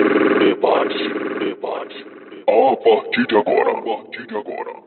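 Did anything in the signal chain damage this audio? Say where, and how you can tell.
No, nothing in the signal chain damaged this audio.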